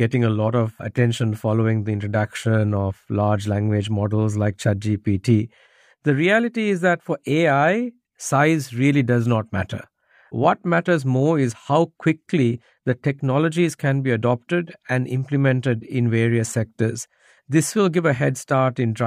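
No technical faults can be heard at any point in the recording. There is nothing in the audio path that calls for comment.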